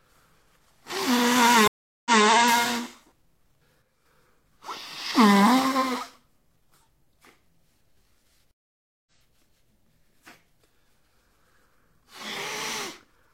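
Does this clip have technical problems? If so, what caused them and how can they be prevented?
Yes. Twice the connection to the server broke, the player fell silent, then reconnected and started a new decoder partway through the stream, which is a stream reconnect. From 1.68 to 2.24 s there is a gap of about 0.38 s, after which the sound picks up 0.19 s earlier than where it stopped, so a short stretch repeats as the server resends buffered data. From 8.51 to 9.11 s the gap is about 0.55 s, and the sound resumes roughly 0.3 s later, so that piece is simply lost. In both cases the restart fades in as the fresh decoder starts up. A larger client buffer with seamless resume, which reconnects and splices at the exact byte or timestamp, would prevent both reconnects.

From 3.82 to 4.06 s the likely cause is that one stereo channel was lost for a moment, so one channel drops out. Once the signal is folded to mono, everything shared by both channels falls abruptly by about 6 dB, and anything present only in the missing channel vanishes. 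The sound dips for roughly a quarter of a second, then jumps back to full level. Checking the channel routing and connections, and monitoring for loss on either channel before the mono downmix, would prevent it.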